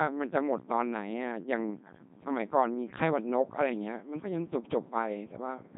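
From start to finish the speech has passed through a Codec 2 vocoder, and the damage is heavy. Rather than carrying the waveform, the link sent only pitch, voicing, energy and a coarse spectral envelope, and the decoder rebuilt the voice from sine waves. The result is robotic and buzzy, with nothing above 3.8 kHz, and the sparse detail fits a rate of about 2.4 kbit/s. Unlike a simple low-pass or a waveform codec at low rate, this sounds synthetic.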